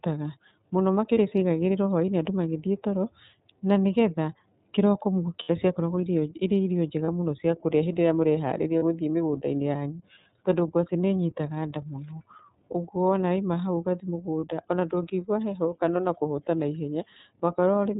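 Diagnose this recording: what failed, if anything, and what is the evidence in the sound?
iLBC codec coding, throughout the speech: the codec stage is at fault. The band stops at 4 kHz, so sibilants and airiness are missing, and the speech has a plainly audible rough, slightly synthetic grain. Each frame's excitation is coded on its own, without reference to the previous frame. The character fits the 13.33 kbps mode with 30 ms frames.

Lost iLBC frames, at 1.14 s (just before "ciaigagĩrĩrwo hwainĩ andũ"), 5.44 s, 7.05 s (between "ciakoragwo irio irĩ irio" and "mũno ciakũrĩa hĩndĩ"), 8.79 s and 14.40 s (just before "ona ndũngĩigwa heho kana"): this is a network fault. Each gap becomes a brief held, buzzy vowel where the decoder repeated the last pitch cycle mixed with noise. Most gaps last about 30 ms, and the one at 5.44 s lasts 60 ms. The speech recovers immediately afterwards.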